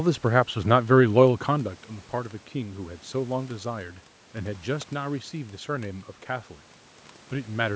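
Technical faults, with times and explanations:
Nothing stood out on listening to this speech recording.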